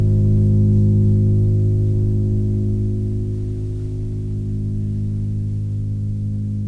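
Listening to the music, nothing stood out as a technical fault at any point.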